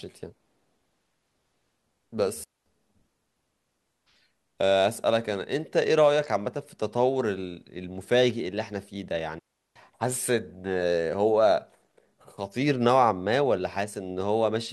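At 2.44 s the speech drops into near silence for about 0.22 s, then returns at 2.66 s. A second gap follows at 9.39 s, lasting about 0.36 s. Both are digital wireless dropouts. The receiver lost too much data and muted briefly. Each hole is clean, with no noise burst around it.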